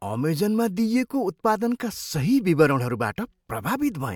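No technical faults are audible.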